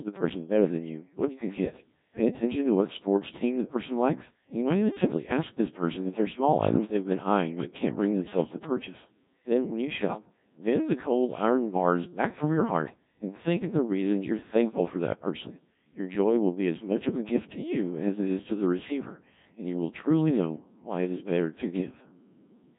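Codec 2 vocoder damage runs throughout: the speech is resynthesised from pitch and envelope, sounding heavily robotic and buzzy, nothing above 3.8 kHz, fitting a 1.3 kbit/s mode.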